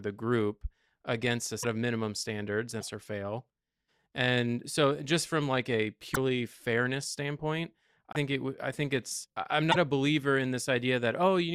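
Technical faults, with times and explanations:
1.62–1.65, 2.80–2.83, 6.13–6.17, 8.13–8.16 and 9.71–9.76 s: broken MP3 bit reservoir, likely. Lost frames, each about 24 ms, leave the following frame decoding borrowed bits from the wrong data, so the speech jumps ahead with a brief chirp, noise burst or short hole, after "group against a", after "of minimum standards" and after "fairness standpoint".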